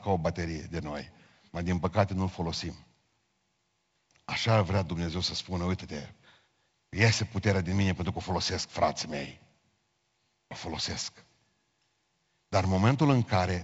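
No technical faults can be heard in this speech recording, which has been carried through G.722 wideband telephone coding at a rate that points to 48 kbit/s, so the band stops at about 7.7 kHz, with a faint hiss in the upper band and slightly grainier lower-band detail as light traces of the codec.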